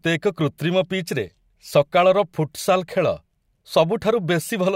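No technical faults turn up anywhere in this speech recording, so there's nothing here to walk through.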